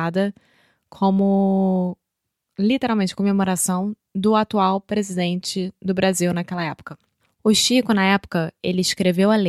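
No technical faults detected.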